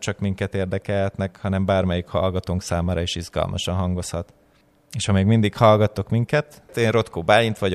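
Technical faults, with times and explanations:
No technical faults can be heard in this speech recording. There is nothing here to time or explain.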